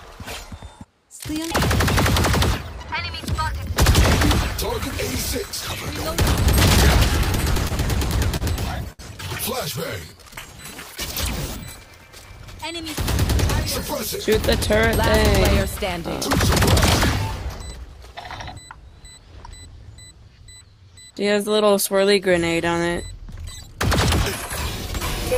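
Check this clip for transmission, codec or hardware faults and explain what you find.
Three network-timing faults appear, all from the receiver's jitter buffer.

Repeated stalls (stutter), 7.25 to 9.01 s: packets arrived late, the buffer emptied eight times, and each gap, up to 64 ms, was filled by extending the last sound. The result is a dragging stutter with nothing lost.

Jitter buffer slow-down, 9.99 to 10.85 s: to rebuild its reserve, the receiver repeated pitch periods, adding 97 ms. The audio runs at 90% speed with unchanged pitch and drawn-out sounds.

Jitter buffer speed-up, 17.45 to 19.98 s: an overfull buffer led the receiver to cut short pitch-period pieces, about 150 ms in total. The audio runs at 105% speed, slightly hurried, with pitch unchanged.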